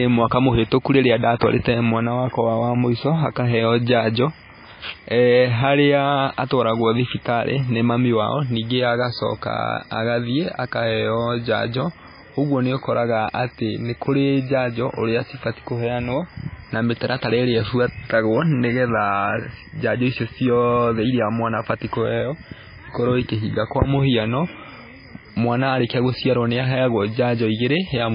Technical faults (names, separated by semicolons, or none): MP3 compression